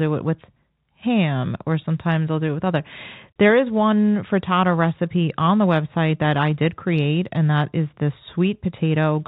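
No technical faults are audible.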